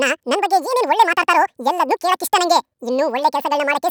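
From start to finish, the speech is affected by audio read two samples at a time (double speed). The reader treats each pair of samples as a single frame. That fits a mono stream taken as stereo, or samples read at twice their true width. Every second of audio plays out in half a second. The speech runs at 2x speed. Pitch rises by 12 semitones, a full octave. Voices sound thin and hurried.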